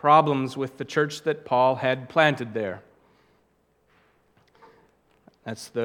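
No technical faults can be heard anywhere in the clip.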